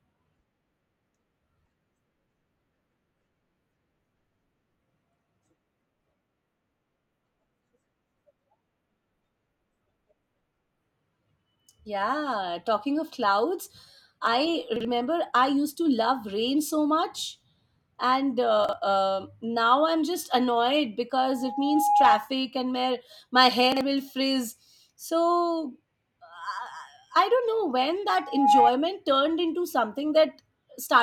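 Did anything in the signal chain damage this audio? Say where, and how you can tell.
Yes. In three places a short block of the speech plays one step out of sequence: 14.76 to 14.85 s, 18.65 to 18.73 s and 23.72 to 23.81 s. Each is a brief jumbled moment. This is chunks out of order at the driver or buffer stage. A block of about 42.7 ms was delivered one slot late. Nothing is missing, but the swapped order leaves three hard joins.

A loudspeaker feedback squeal happens twice at capture, in the acoustic path between loudspeaker and microphone. From 21.22 to 22.27 s an 826 Hz tone swells over roughly 0.7 s. From 28.22 to 28.71 s the same 826 Hz tone rises in about 0.3 s. Both peak at about 10 dB above the speech. The repeated frequency points to one resonance where loop gain passed unity and the tone fed on itself.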